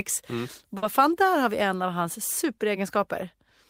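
At about 0.77 to 0.84 s there's a short stall from a late packet: a packet missed its slot, the jitter buffer ran dry, and the receiver stretched the speech by roughly 50 ms. Nothing's lost, but the held sound has a faint buzzy drag, and everything after runs about 50 ms later.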